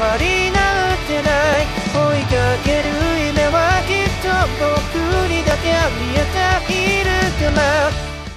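At 1.53 s the sound gives a tiny skip forward. The same happens at 3.52 s and again at 5.51 s. The events fall about 2 s apart, which points to an overlap between stream segments at each segment boundary. Two segments claimed the same stretch of time. The player trimmed that overlap, so 8 to 16 milliseconds of real audio were dropped. The waveform jumps across the gap.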